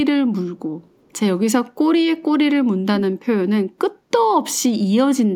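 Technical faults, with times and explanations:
0.90 to 1.13 s, echo leak: a faint, delayed copy of the speech trails the original by about 333 ms, sitting roughly 40 dB below it, so it comes through as a ghostly scrap rather than a clear repeat. It is likely that the far side was on a loudspeaker and its echo canceller let a little of what its microphone picked up slip through, sending that residue back down the line a third of a second late.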